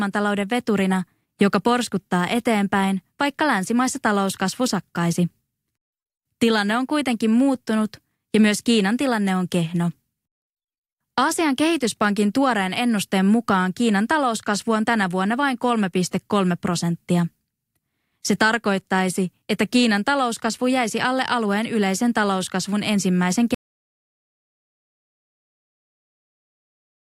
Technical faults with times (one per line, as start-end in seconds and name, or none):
23.54-27.02 audio dropout to silence